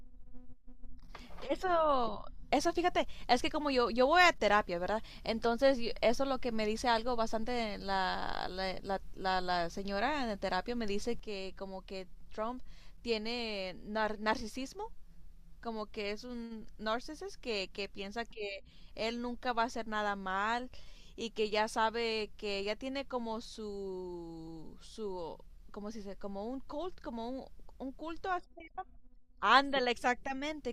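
At 11.2 s the speech drops abruptly by about 6 dB and stays there to the end. The likely cause is one channel dropping out before the mono sum. Unlike a fade or gain change, the step is instant and never recovers.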